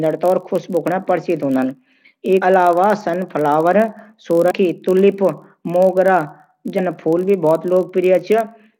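Speech with a steady buzz at about 46.9 Hz running through the whole clip. This is a block size mismatch (padded): each block arrives slightly short and is topped up with silence. The buzz rate fits blocks of 1024 samples. Playback runs only very slightly slow, at 0.999 times normal speed. Three brief glitches break in at 2.37 to 2.43 s, 4.47 to 4.51 s and 6.74 to 6.79 s. Each comes from damaged data in a compressed stream. The decoder misreads the corrupted frames, loses sync and searches for the next frame header before locking onto the next good frame.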